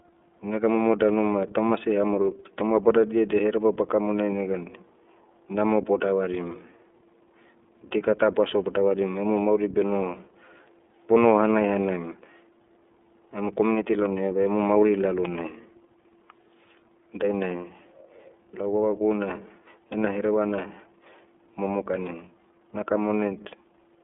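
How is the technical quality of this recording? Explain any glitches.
The quality is limited by the iLBC codec, which affects the whole clip. The speech sounds clear but slightly rough and synthetic, and the coding damage is plainly audible. The codec splits the signal into short frames, here consistent with 30 ms, and codes each one without drawing on the frame before. The sound is narrowband. It sits roughly between 250 Hz and 3.5 kHz, with nothing above 3.8 kHz, so it sounds thin and telephone-like. The roughness fits a low rate of about 13 kbps.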